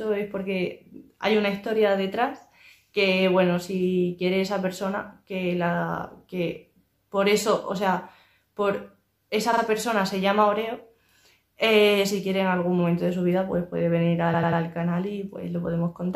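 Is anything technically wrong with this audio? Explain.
Yes, there are repeated frames. At 9.52 s a 46 ms block plays two extra times, which fits two compressed frames being written or sent again, adding 93 ms. At 14.33 s a 93 ms block plays three extra times, adding 279 ms. Each is heard as a short stutter. A spectrogram shows identical slices placed side by side.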